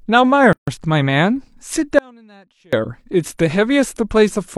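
Speech with two faults. From 0.53 to 0.68 s there is a gap at a join of encoded pieces: continuous sound stops dead for 146 ms and resumes where it left off. The pieces appear to have been encoded separately, about 4 s apart, and joined without trimming the encoder's start delay and end padding. A waveform shows a flat, near-empty stretch with slightly smeared edges, and a spectrogram shows a vertical blank band. From 1.99 to 2.73 s the sound abruptly falls away for 740 ms, leaving only a faint trace about 30 dB below normal before snapping back. This is an audio dropout to a faint residue, likely from the wanted signal being lost while the downstream path stayed live. On a waveform the envelope collapses to a thin sliver with sharp edges rather than a taper. A spectrogram shows a dim band with no fade in or out.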